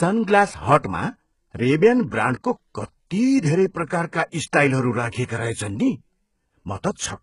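Speech, heavily coloured throughout: the treble sounds gritty and metallic, s sounds come out lispy, and a spectrogram shows smeared, copied-looking high bands cut off sharply at 11.1 kHz. This most likely comes from HE-AAC compression, whose band replication rebuilds the treble from lower bands, and the heavy damage points to a very low bitrate of around 12 kbps. Pre-echo appears twice: a short hiss runs ahead of attacks from 0.80 to 0.84 s (40 ms) and from 3.86 to 3.90 s (36 ms). The codec spread its noise across the whole block, so on a waveform or spectrogram a noise smear shows just before each onset, and the attacks sound softened.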